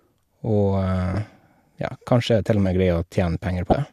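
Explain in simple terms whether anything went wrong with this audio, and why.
Two brief glitches interrupt the speech, at 1.14 s and from 3.70 to 3.73 s. This is damaged data in a compressed stream: corrupted bytes made the decoder misread frames. Unlike a plain dropout, which goes silent, here the decoder loses its place and searches for the next frame.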